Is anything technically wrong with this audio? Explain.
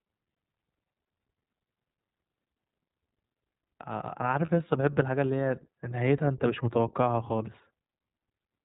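Yes. The whole clip has passed through the iLBC codec, and one short dropout occurs midway.

The iLBC codec damage is plainly audible throughout. This narrowband codec discards everything above 4 kHz, so the speech sounds muffled and phone-like. Each frame's excitation is coded on its own, with no help from the previous frame. That makes the voice slightly rough and synthetic. The frame timing fits 20 ms frames, and the coarseness fits the 15.2 kbps mode.

A lost iLBC frame falls at 4.46 to 4.49 s. The missing packet likely held one 20 ms frame. The decoder covers the gap by repeating the last pitch cycle blended with noise. That produces a brief held, faintly buzzy vowel. Because the next frame decodes independently, the voice recovers almost immediately.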